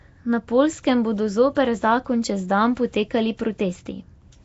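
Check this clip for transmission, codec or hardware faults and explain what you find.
There's one fault, and it runs through the whole clip: Nellymoser compression, likely the cause of the rough, hissy halo around the speech. The smeared, underwater quality is plainly audible, and nothing sits above 7.7 kHz, which fits a rate around 32 kbps. The codec spends a fixed, small bit budget on short blocks, so weaker bands get no bits and are filled with noise.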